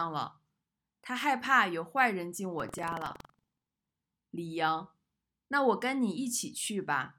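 The write pointer and the read pointer of the playback ring buffer have drifted into each other in this speech recording, causing buffer tearing from 2.55 s to 3.95 s. In every period, about a tenth of the buffer still holds audio from roughly 150 ms earlier, spliced in with hard edges at both ends. The result is a steady robotic rattle at 21.5 Hz, which fits a 2048-sample buffer, heard only while the speech is sounding.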